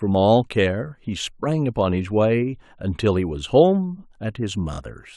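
At 4.73 s a short stutter is heard, lasting until 4.77 s. A 23.2 ms block of sound plays two extra times, which fits a single compressed frame repeated. These repeated frames add 46.4 ms to the audio.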